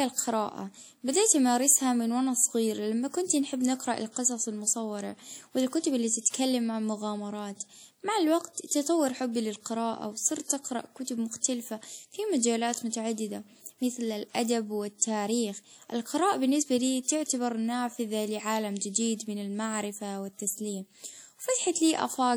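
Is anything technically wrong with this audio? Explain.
Yes. WMA compression runs through the whole speech clip, likely from a simple WMA encoder at a low rate near 48 kbps. Long transform blocks smear quantisation noise over tens of milliseconds and drop weak spectral lines, leaving a plainly audible ringing, washy sound with hiss that pumps alongside the voice.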